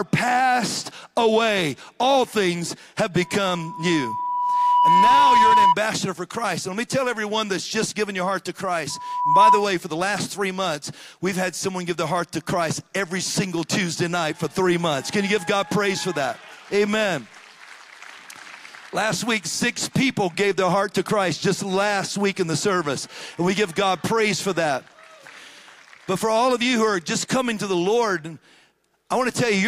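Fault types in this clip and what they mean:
Loudspeaker feedback squeal: a microphone is hearing the loudspeaker it drives, and at 981 Hz the loop gain goes above unity, so that one frequency keeps reinforcing itself. Here it shows up twice as a pure tone that swells out of the audio. From 3.21 s to 5.75 s it builds over roughly a second and a half, and from 8.90 s to 9.69 s it builds in about half a second. Both times it peaks around 10 dB above the programme.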